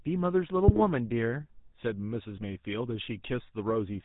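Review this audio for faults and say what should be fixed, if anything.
The speech has been through the GSM full-rate codec for its whole length, at a rate that fits 13 kbit/s. That coder keeps a simple vocal-tract filter and rebuilds the excitation from sparse, regularly spaced pulses, discarding most of the fine detail, and it passes nothing above 4 kHz. The damage is plainly audible: a dull, band-limited tone with a buzzy, gravelly grain over the voice. To prevent it, capture or route the speech over a wideband path instead of through a GSM full-rate leg.

There are GSM bit errors from 0.68 to 0.81 s and again from 2.30 to 2.45 s. In each burst, corrupted bits reached the decoder and scrambled the filter, pitch and gain values it uses to rebuild each frame, across a short run of consecutive frames. The spectral shape lurches and the level jumps, so the voice breaks into squawks, pops and a gargling sound for those moments before the decoder recovers. 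To prevent it, use a stronger radio link or stronger channel protection so that errored frames are concealed rather than decoded.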